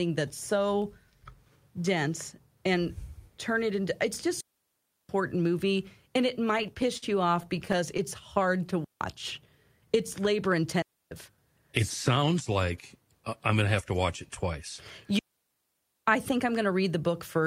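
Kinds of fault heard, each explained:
Digital wireless dropout: at 4.41 to 5.09 s, 8.84 to 9.01 s, 10.82 to 11.11 s and 15.19 to 16.07 s, the speech drops into clean near silence for about 0.17 to 0.88 s, with no noise burst on either side. The radio link lost too much data, so the receiver muted with a quick fade. The longest holes fall between "turn it into it's" and "movie and it", and between "to watch it twice" and "I think I'm going".
Repeated stalls (stutter): at 6.45 to 7.04 s and 7.43 to 8.00 s, the speech drags and hiccups instead of cutting out. Data arrived late, so the jitter buffer ran dry over and over: seven times in the first stretch and six in the second. Each time, the receiver stretched the last sound to bridge the wait. About 104 ms and 57 ms were filled this way, with gaps up to 51 ms and 12 ms long. Nothing is actually lost.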